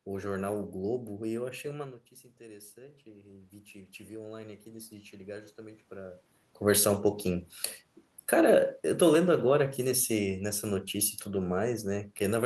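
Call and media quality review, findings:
Automatic gain rising, 1.7 to 6.26 s: the AGC reacts when the input drops by about 17 dB as the talker moves away near 2 s. It ramps gain up about 10 dB over roughly 4.5 s, so voice and room noise swell together while level is only partly restored.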